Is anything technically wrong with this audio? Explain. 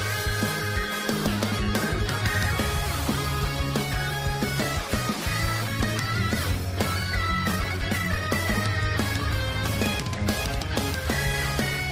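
Yes, there are two kinds of fault. At 5.61 s a skip ahead drops about a second and a half of sound with no fill. The join is abrupt, and a waveform shows an instant splice with no silence. From 7.53 to 8.31 s, jitter buffer speed-up runs the sound at 161% speed, trimming about half a second in short pitch-period cuts. It sounds hurried at unchanged pitch, and a spectrogram shows compressed timing with the harmonics in place. From 10.02 to 11.05 s a milder speed-up at 105% trims a small amount and is just fast enough to sound hurried.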